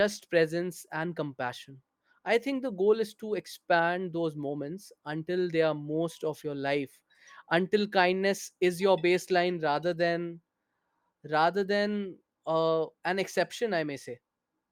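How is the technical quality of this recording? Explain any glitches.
No technical glitches can be heard anywhere in this speech recording. Nothing in it calls for an explanation.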